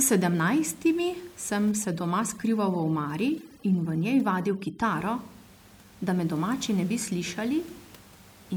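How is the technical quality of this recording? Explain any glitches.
The recording has one glitch, with room noise sitting about 25 dB below the speech. From 1.71 to 4.83 s, overdone noise removal strips frequency bands near the noise estimate, leaving near-silent gaps with twinkling specks.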